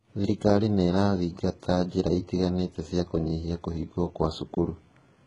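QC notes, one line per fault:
Throughout, HE-AAC compression: a low-bitrate encode, likely at around 12 kbps, rebuilt the treble by copying lower bands upward instead of coding it. The damage is heavy: sibilants in the speech sound gritty and lispy, with nothing above 11 kHz.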